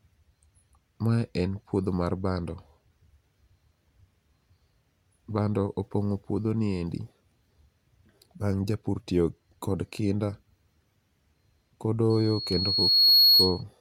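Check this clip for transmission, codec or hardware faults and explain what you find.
One fault is present, near the end of the speech.

Loudspeaker feedback squeal, 12.10 to 13.63 s: the microphone is re-amplifying its own loudspeaker output, and at 4.3 kHz the loop gain tops unity. A pure tone swells over roughly a second to around 10 dB above the speech.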